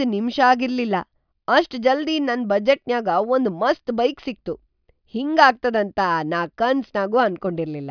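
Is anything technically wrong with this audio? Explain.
No, nothing technically wrong can be heard in this recording. There is no audible fault anywhere in the speech.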